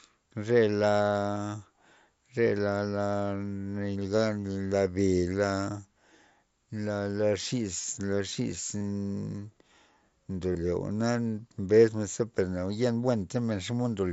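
Concealed Bluetooth headset packet loss at 7.77 to 7.84 s, 8.78 to 8.81 s and 10.53 to 10.55 s: lost packets were filled by repeating recent waveform, giving brief buzzy held tones. On a waveform these look like short periodic copies; on a spectrogram they appear as flat harmonic bands.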